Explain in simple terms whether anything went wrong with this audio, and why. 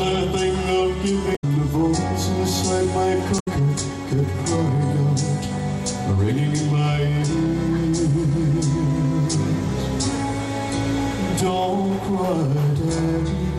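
Damaged data in a compressed stream, at 1.32 to 1.44 s and 3.36 to 3.48 s: corrupted bytes made the decoder lose its place briefly, leaving short glitches in the sound.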